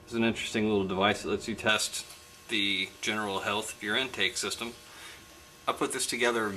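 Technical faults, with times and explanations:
1.69–6.56 s, pre-emphasis left on: from 1.69 s to the end, the treble rises steadily, to about 11 dB above the 1 kHz level by 10 kHz, which fits a J.17-type emphasis curve whose matching de-emphasis never ran. The sound turns thin, bright and hissy. Unlike a bass cut, the low end keeps its level and only the top tilts upward. Unlike a narrow presence peak, the lift keeps climbing smoothly into the highest frequencies.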